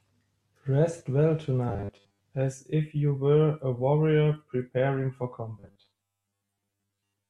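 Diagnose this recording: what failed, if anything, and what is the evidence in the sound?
Robotic sound from repeated short buffers at 1.69–2.24 s and 5.60 s to the end, at the buffer stage: a rigid 100 Hz buzz, likely from 10 ms chunks replayed. The spectrogram shows evenly spaced horizontal lines.

Corrupt frame decoded at 1.96 s, at the codec stage: a very faint blip across a few frames, seen as a brief smear of misplaced energy on the spectrogram.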